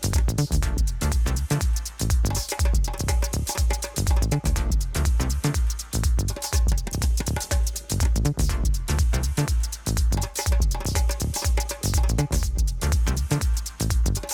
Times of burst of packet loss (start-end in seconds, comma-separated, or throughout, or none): none